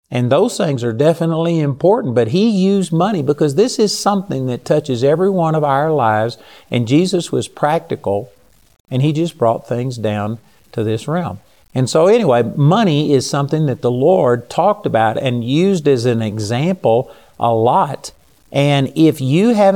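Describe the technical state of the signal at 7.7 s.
At 7.7 s the speech is likely reduced to a low bit depth without dither, about 9 bits and truncated, from 2.74 s, just after "definitely important but he", to the end. The error tracks the signal, so quiet passages turn grainy, with noise roughly 40 dB below the speech.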